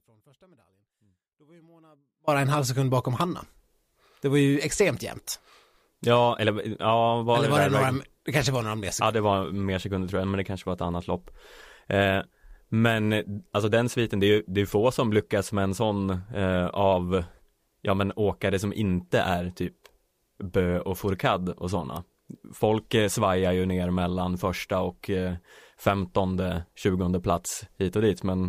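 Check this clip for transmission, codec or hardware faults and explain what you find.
Two faults are audible: a dropout at the very start and two short electrical spikes later on.

Audio dropout to a faint residue, from 0 to 2.28 s: the speech is already lost when the clip begins and returns abruptly at 2.28 s. Only a faint trace remains in the gap, roughly 35 dB below the normal level. The likely cause is a break in the wanted signal while the downstream path stayed live, so what remains is a faint residue rather than true silence.

Electrical switching spike, at 3.21 s and again at 21.96 s: each is a sharp snap or tight cluster of clicks lasting only a few milliseconds, sitting on top of the speech rather than replacing it. The likely cause is a nearby switch, relay or static discharge arcing briefly, with the line picking up that burst as an abrupt transient.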